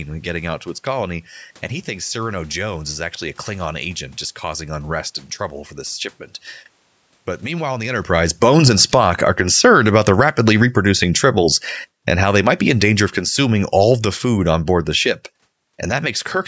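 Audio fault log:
7.54–15.04 s, automatic gain falling: the speech and the room noise behind it sink together, ending about 16 dB lower. The automatic gain control judged the input too loud or its background noise too strong and eased its gain down gradually, so the background drops along with the voice.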